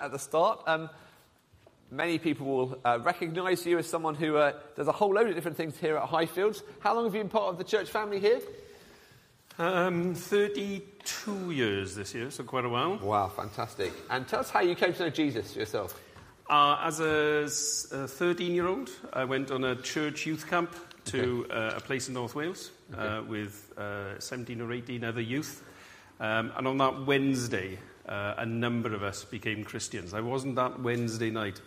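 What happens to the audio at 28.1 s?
Nothing goes wrong at 28.1 s; the audio plays through that moment intact, with no dropout, click or distortion.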